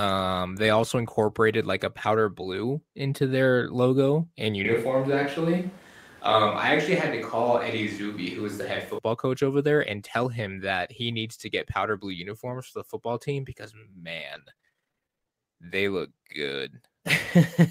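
Switch to a distant microphone, from 4.65 to 8.98 s: the speech turns suddenly roomy and hollow, with thinner bass and room noise roughly 25 dB below the speech. There is no clear drop in level. The cause is likely that the close microphone dropped out and a farther one took over, until the sound snaps back at the end.

Lost packet rebuilt from error correction, at 5.13 to 5.15 s, inside that distant stretch: one 20 ms packet went missing. The decoder filled it from a low-bitrate backup copy carried in the following packet, so there is no gap, just a brief rougher, noisier patch.

Repeated packet loss (robotic sound), from 14.31 to 15.28 s: 21 short dropouts, the longest 29 ms, arrive one after another. Each is papered over by extending the preceding sound, so about 40 percent of this span is concealment. The result is choppy, with pieces missing.

Jitter buffer slow-down, from 15.28 to 15.53 s: right after the losses, the receiver rebuilds its reserve by repeating single pitch periods or bits of pauses. 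This adds 47 ms, so the sound plays at about 84 percent speed with unchanged pitch, drawn out.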